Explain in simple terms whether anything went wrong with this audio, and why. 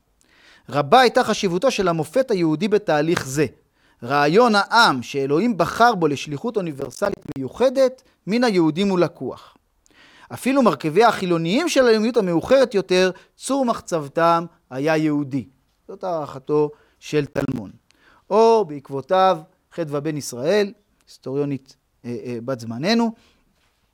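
Processor overload crackle at 6.81 to 7.36 s and 17.26 to 17.58 s: the computer fell behind, dropping dozens of tiny audio chunks as silent gaps, heard as gritty crackling.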